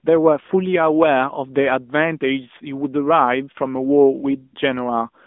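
Throughout, the speech sounds thin and buzzy within 200 Hz to 3.6 kHz: the AMR narrowband mobile codec at 10.2 kbps rebuilds it from sparse pulses.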